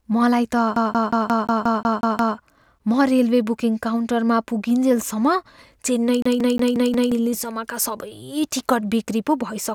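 A disc stuck on one turn, with the laser jumping back at the same spot, repeats a 0.18 s fragment after "मलाई त" nine times from 0.76 to 2.37 s, then another 0.18 s fragment five times from 6.22 to 7.12 s, stuttering evenly.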